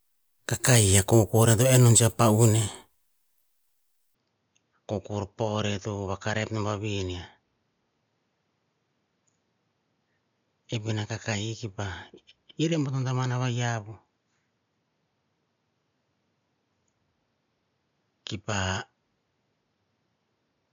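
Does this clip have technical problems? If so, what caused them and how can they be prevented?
Yes. Input switched to a poorer device from 4.15 s to the end: with no gap, the speech turns duller and roughly 10 dB quieter, loses everything above 6.9 kHz, and gains a new background noise some 45 dB below it. This is likely the system changing to a different microphone mid-recording. To prevent it, fix the recording input to one device and turn off automatic device switching.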